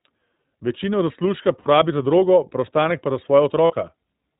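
Throughout, the speech sounds band-limited, slightly rough and synthetic, with nothing above 4 kHz, typical of the iLBC codec; the damage fits its 15.2 kbps, 20 ms frame mode. From 1.60 to 1.68 s, a brief held, buzzy vowel replaces the sound for 60 ms, then clears almost immediately. These are lost iLBC frames, which the decoder concealed by repeating the last pitch cycle with noise. From 3.66 to 3.74 s, the same held, buzzy smear returns for 40 ms.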